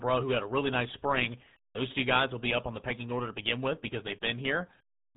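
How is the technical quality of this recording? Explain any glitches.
The quality is poor because of a single fault lasting the whole speech clip: the RealAudio 14.4 codec. Squeezing the signal into what sounds like an 8 kbit/s RealAudio 1 stream strips everything above 3.9 kHz and crudely models what remains. The speech comes out heavily muffled and gargly, with a smeared, watery texture.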